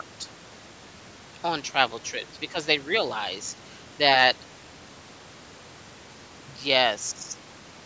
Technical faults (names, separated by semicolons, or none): none